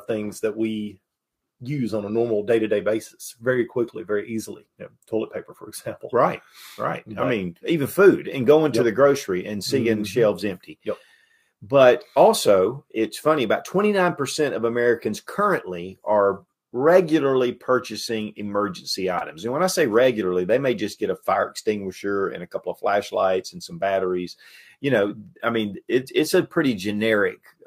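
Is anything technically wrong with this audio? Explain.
No, the signal shows no technical faults anywhere in the recording.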